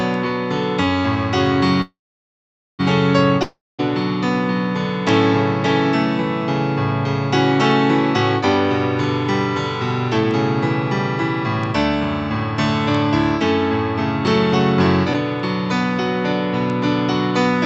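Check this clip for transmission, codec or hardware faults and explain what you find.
Four transmission faults are audible, all of the kind a packet-based call link produces. The whole clip also carries call-codec coding, with its spectrum ending near 8 kHz, which fits an Opus-style path.

From 1.81 to 2.81 s there is a call audio freeze, likely from packets held up on the network until the jitter buffer ran dry. The last sound is stretched into a fading buzz, then about 0.85 s of silence. Playback resumes where it stopped, so nothing is lost. On a waveform this shows as a flat gap inserted into the audio, and on a spectrogram as a smeared tail that fades to blank.

From 3.43 to 3.81 s a long network dropout occurs, likely because packets never arrived. A brief fading concealment gives way to about 0.21 s of silence, and the audio comes back roughly 0.36 s further on, with that stretch missing. 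A spectrogram shows a blank column and a mismatched join.

Between 10.18 and 10.24 s, jitter buffer speed-up trims about 50 ms by cutting out pitch-period-sized pieces, so the audio briefly runs at roughly 183% speed at unchanged pitch and sounds rushed. Harmonic lines keep their height but appear compressed in time.

At 15.13 to 15.16 s there is a skip ahead. Around 200 ms of audio is dropped, and the two sides are spliced with only a few milliseconds of fill. It sounds like an abrupt jump, and the waveform shows a near-seamless discontinuity with no visible gap.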